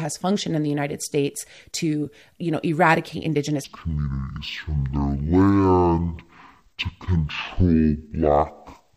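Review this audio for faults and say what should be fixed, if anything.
Stereo read as mono, 3.64 s to the end after "to you know eradicate": interleaved samples read as one channel give half-speed speech an octave low. Check the channel count in the header and deinterleave stereo frames before decoding.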